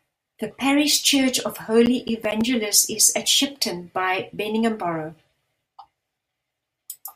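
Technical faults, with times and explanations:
1.86 to 2.41 s, processor overload crackle. The speech breaks into a gritty crackle for about half a second. Several buffers of roughly 10 ms each missed their deadline. Each miss dropped to silence with hard edges. The rapid clicks tear through the sound.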